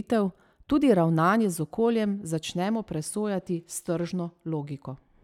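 No technical faults are audible.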